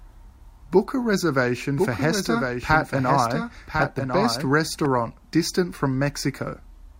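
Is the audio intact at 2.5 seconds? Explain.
No. From 1.52 to 4.86 s a doubled audio track is present: a full-band second copy of the speech runs about a second behind, somewhat quieter, likely from a slower capture path. Unlike an echo, it has no decay or room colour and starts and stops abruptly.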